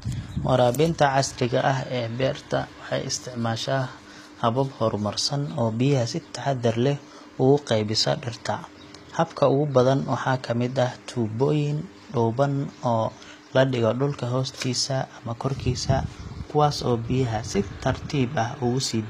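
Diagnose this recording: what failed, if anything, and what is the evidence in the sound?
The codec stage failed: throughout, the speech carries plainly audible likely HE-AAC compression, consistent with a rate near 24 kbps. S sounds turn gritty and lispy because the treble is copied upward from lower bands. A spectrogram shows blocky, repeated high bands cut sharply at 14.9 kHz.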